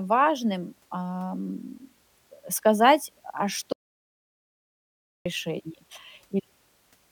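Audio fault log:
3.73–5.26 s, audio dropout to silence: speech cuts mid-flow into 1.53 s of dead silence with no room tone, likely from input lost while recording continued.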